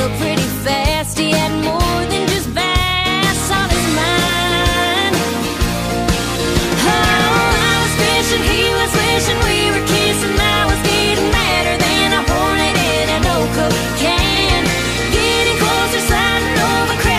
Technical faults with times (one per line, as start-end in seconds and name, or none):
none